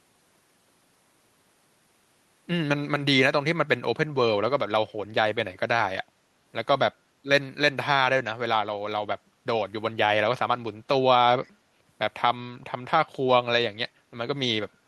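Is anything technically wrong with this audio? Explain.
Yes. From 11.44 to 11.51 s, a faint scrap of speech surfaces, delayed by about 0.35 s and far below the main level. This is likely an echo leak: a loudspeaker's output reached the far-end microphone, and its echo canceller let a fragment return.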